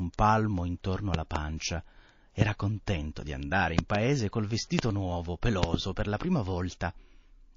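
A low-bitrate MP3 encode, likely around 32 kbps, has starved this speech recording of bits throughout, so the MP3 compression is plainly audible: weak frequency detail flickers in and out, giving a watery, swirly texture with metallic edges on sibilants. A transient voltage disturbance, likely from a plug, switch or static discharge, injects loud pops about 20 dB above the speech. Double pops fall at 1.14–1.38 s, at 3.79–3.97 s just after "contento di andare", and at 5.63–5.76 s just before "per la prima". Single ones fall at 2.41–2.44 s just before "contento di andare" and at 4.79–4.81 s, the last nearer 25 dB. Pre-echo comes from the codec holding a long transform window of about 72 ms across a sharp attack instead of switching to short blocks. At 1.57–1.60 s, quantisation noise about 12 dB up smears into the 29 ms before the onset, heard as a brief hiss ahead of a softened attack.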